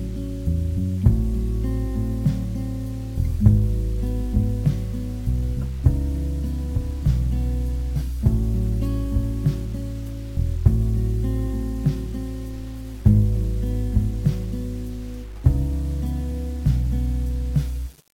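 From start to finish the audio carries grainy distortion that tracks the signal. Quiet passages turn rough and the faintest parts break up or fall to silence. This is most likely low bit depth without dither: the samples were rounded to a coarse grid, which fits an 8-bit word length. With no dither, the rounding error stays correlated with the signal instead of becoming steady hiss. The error sits roughly 30 dB below the signal.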